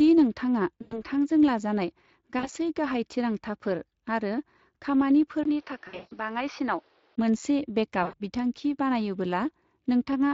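Speex codec damage runs through the whole speech clip: CELP coding at a bitrate that fits a setting near 20 kbps still leaves the excitation coarse, so the voice sounds plainly hoarse and grainy.

VoIP packet loss concealed by the speech codec hits from 0.81 to 1.03 s (about 100 ms missing) and from 2.39 to 2.49 s, just before "गाहाय थिरांथाफोर आरो". The decoder stretches its last pitch and filter, so each gap becomes a buzzy tone or coloured noise that fades, and the voice stays weak briefly afterwards.

At 5.43 s a 20 ms silence marks the start of a dull stretch lasting to 7.18 s. Nothing is left above 6.2 kHz, the level drops roughly 5 dB, and a new noise floor sits about 35 dB down. This is likely an input switched to a poorer device.

Inside that stretch, from 5.87 to 6.13 s, packet loss returns, with 220 ms lost over 240 ms and a longest run of 160 ms. A final loss from 8.03 to 8.15 s (100 ms) fades the same way.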